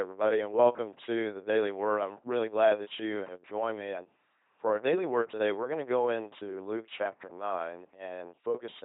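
Throughout, the speech passes through an LPC-10 vocoder, consistent with a 2.4 kbit/s military codec. Each moment is rebuilt from a buzzing pulse train or noise through a simple filter, giving a mechanical robot voice with stray buzz and hiss, and nothing above 3.8 kHz.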